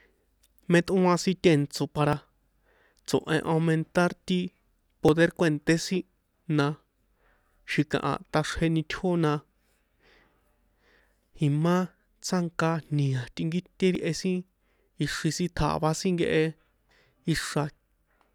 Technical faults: audio missing between chunks

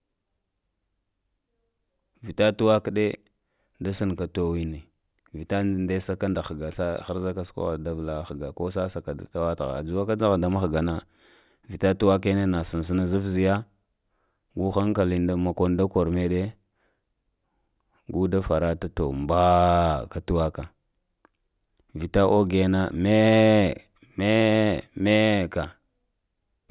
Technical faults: none

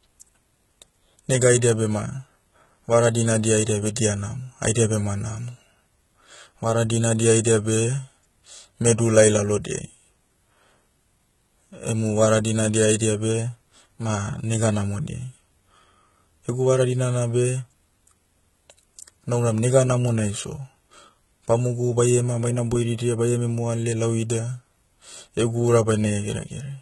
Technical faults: HE-AAC compression; pre-echo

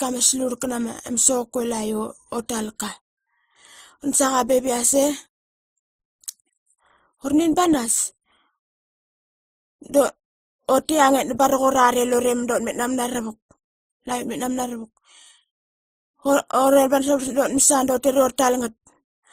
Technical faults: transcoding between lossy codecs

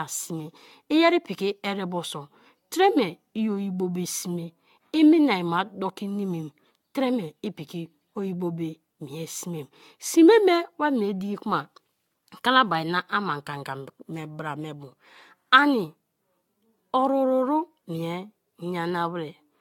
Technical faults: generation loss

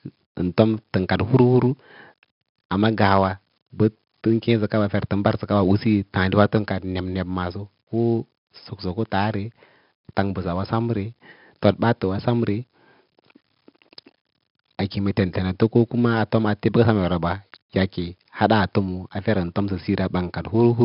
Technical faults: 4-bit ADPCM compression

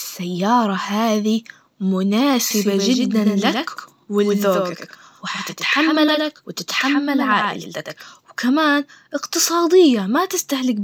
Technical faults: doubled audio track

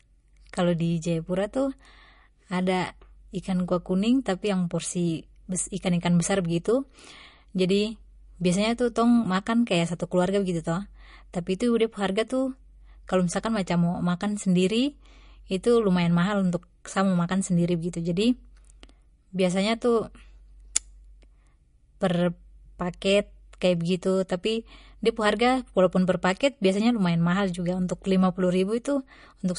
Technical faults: MP3 compression

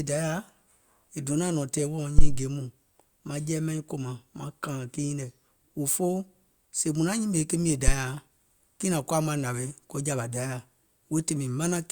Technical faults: phantom power thump

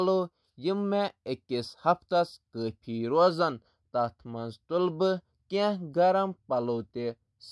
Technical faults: none

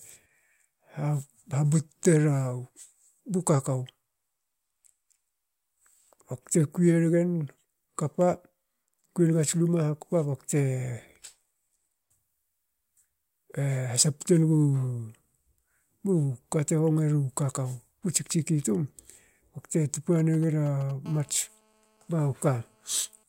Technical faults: GSM signalling bursts; GSM phone buzz

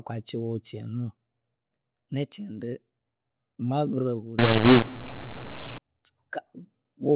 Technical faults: mu-law and A-law mixed up

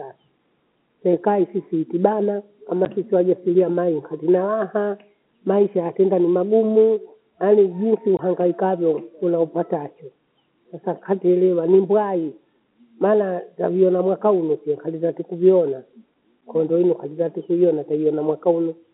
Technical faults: packet loss filled with silence

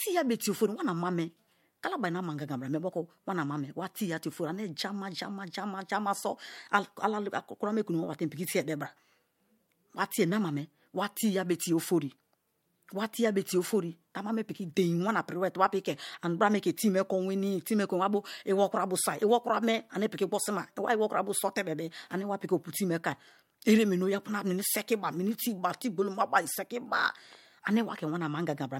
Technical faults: low-bitrate audio saved at a high bitrate

